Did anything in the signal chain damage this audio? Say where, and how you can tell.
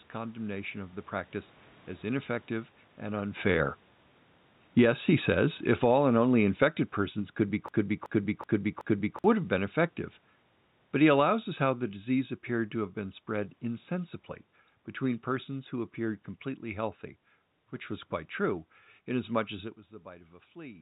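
Yes. From 3.32 s to 16.26 s the level sinks steadily by about 14 dB, and the room noise sinks with it. That points to automatic gain falling in the call processing stage. A talker moving, as happens near 3.5 s, changes only the voice. Here the gain control judged the input too loud, or its background noise too strong, and pulled its gain down gradually over about thirteen seconds, taking everything in the signal along.

From 7.69 s to 9.24 s a fragment of about 0.38 s plays four times back to back, identical on each pass, within the 4 kHz band of the G.711 call path. This is a broken-record loop. Exact repetition means a stage upstream of the output stalled, most likely the stream or playback buffer, and kept resending the last fragment it held. The audio that should have filled that stretch is lost.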